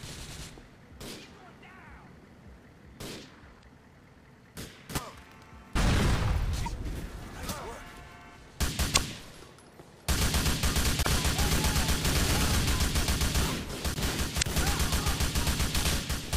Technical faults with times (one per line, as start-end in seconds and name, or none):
3.59-3.65 damaged data in a compressed stream
6.62-6.68 damaged data in a compressed stream
8.92-8.98 damaged data in a compressed stream
11.01-11.07 damaged data in a compressed stream
14.38-14.44 damaged data in a compressed stream